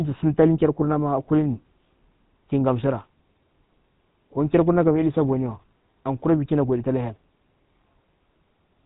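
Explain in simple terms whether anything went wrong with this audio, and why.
The speech has passed through a GSM full-rate codec for its whole length, start to finish. This early mobile-phone codec rebuilds the voice from a simple vocal-tract model and a pulse pattern, giving a buzzy, gravelly roughness, and it discards everything above 3.8 kHz, making the sound narrow and muffled.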